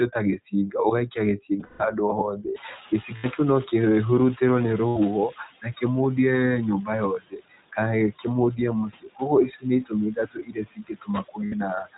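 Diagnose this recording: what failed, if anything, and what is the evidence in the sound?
Between phrases the background drops away and then swells back under the speech. These are noise suppressor artifacts: call processing is pulling steady-noise bands down by about 14 dB frame by frame and releasing them when speech arrives.

The whole recording sounds band-limited, with nothing above 4 kHz, and speech is intelligible but plainly rough and somewhat synthetic. That points to the iLBC codec, a narrowband VoIP coder working on 20 ms frames. The character fits its 15.2 kbps mode, where each frame's excitation is coded on its own.

Brief held, buzzy vowel-like sounds replace the speech at 1.60–1.81 s, 3.16–3.26 s, 4.88–4.98 s and 11.46–11.54 s. These are lost iLBC frames on the network path. The first gap is broken up, with its longest stretch around 150 ms. The decoder repeats the last pitch cycle mixed with noise, and speech recovers immediately afterwards.

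The room noise rises by about 17 dB around 2.5 s. From 2.55 to 5.42 s it comes through with less reduction at first before gradually sinking again. This is the noise suppressor catching up. Its noise estimate lags the sudden change and takes about 2.9 s to adapt, eventually cutting the noise by about 11 dB.

Parts of the speech sound swallowed or faint at 7.3–7.77 s, 8.9–9.2 s and 10.16–11.08 s, with dips of about 16, 14 and 16 dB. This is speech cut by the noise suppressor. It mistakes soft consonants or quiet syllables for noise and attenuates them along with the background.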